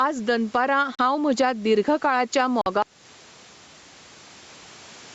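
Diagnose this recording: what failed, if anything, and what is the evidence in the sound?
The gain swings by roughly 10 dB with the speech, so the level sounds squashed. That is gain pumping at the input stage, likely from mic gain set far too high with a fast limiter clamping each peak.

Two brief holes cut the speech to silence: about 40 ms at 0.95 s, just before "म्हज्या दीर्घकाळाच्या", and about 47 ms at 2.61 s, just after those words. This is a Bluetooth stall in the wireless playback link, likely where interference delayed packets and the headphone buffer ran dry until resends arrived.

At 2.82 s, right after "म्हज्या दीर्घकाळाच्या", the audio cuts out and stays dead to the end. Even the room tone vanishes, leaving plain silence. This audio dropout to silence points to the capture or encoding stage, likely a lost input while the recorder kept writing empty samples.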